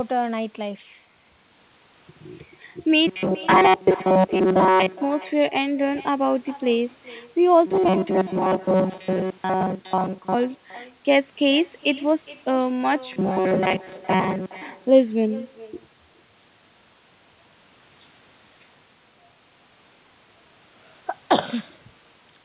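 A speech recording from a call path that stops at 4 kHz, consistent with G.711 A-law at 64 kbps, shows two faults. Echo with no canceller runs throughout: every phrase returns around 400 ms later as a quieter, thinner copy, about 21 dB below the speech. The far end's loudspeaker is feeding its microphone, and nothing removes that signal before it travels back. Robotic sound from repeated short buffers appears at 3.07–4.95 s, 7.67–10.34 s and 13.13–14.61 s. In these stretches the speech becomes a rigid metallic buzz fixed at 188 Hz that only loosely follows the words. The likely cause is audio arriving too infrequently, so the receiver loops a segment of about 5.3 ms (one over 188 Hz) in place of most of the real signal, which is skipped.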